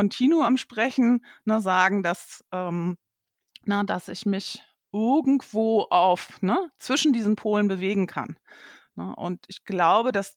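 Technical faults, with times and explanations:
No technical faults are present in this clip.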